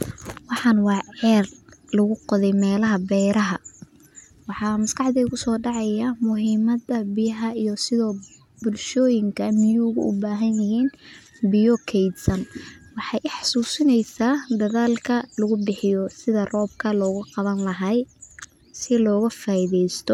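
No technical faults are audible anywhere in the speech recording.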